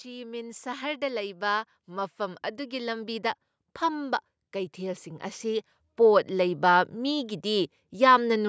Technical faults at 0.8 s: automatic gain rising

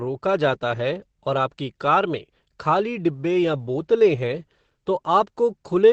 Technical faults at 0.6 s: Opus compression

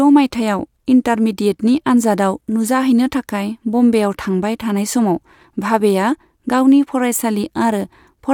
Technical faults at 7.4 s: none

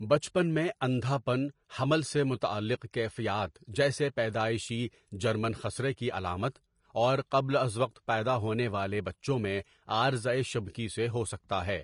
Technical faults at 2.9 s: Vorbis compression; pre-echo

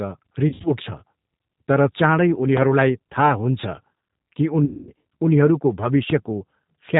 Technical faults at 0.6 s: G.729 codec; VoIP packet loss concealed by the speech codec

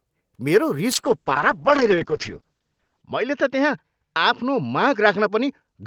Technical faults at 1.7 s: call bitrate drop

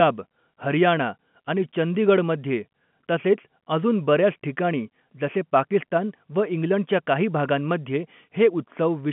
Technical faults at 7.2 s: none

